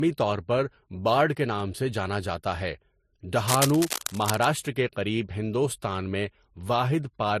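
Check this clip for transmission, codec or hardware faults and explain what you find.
Two faults are present: codec damage across the whole speech clip, and a short scratching burst near the middle.

Transcoding between lossy codecs runs throughout. Nothing is heard above 14.6 kHz. The speech carries two kinds of lossy artefact at once. This likely comes from an MP3 encode being re-encoded to Vorbis, both at low bitrates near 50 kbit/s. The second codec spent bits re-coding the first one's damage.

Cable scratch noise runs from 3.47 to 4.45 s, ending just before "کے قریب ہندوستان میں". Dense, uneven rustling sits over the speech, a little below its level. The likely cause is a worn cable or connector being moved, so its contact resistance fluctuated rapidly.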